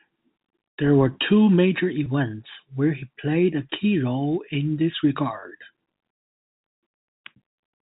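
At 2.04 s after "were two major", at 3.70 s after "where he played a", and at 5.40 s after "role in this", about 20 ms of the telephone-band speech drops out through packet loss with pitch repetition. Each time the receiver loops the last pitch period to fill the gap, so the sound briefly holds on a slightly buzzy tone. On a waveform this appears as a short run of identical cycles, and on a spectrogram as a brief stretch of flat, unmoving harmonics.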